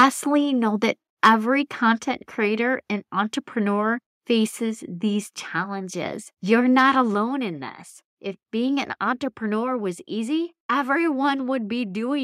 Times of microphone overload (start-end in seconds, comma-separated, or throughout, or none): 0.00-0.06, 1.24-1.29, 6.78-6.83